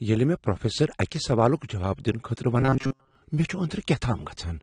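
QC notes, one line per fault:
throughout: AAC compression, likely a low-bitrate AAC-LC encode near 32 kbps, with plainly audible dull, smeared, warbling spectral damage.
2.60–3.15 s: robotic sound from repeated short buffers, just before "مے چُھ"; most of the span is likely a short chunk replayed, forcing a rigid metallic 134 Hz buzz, which fits roughly 7.5 ms repeats.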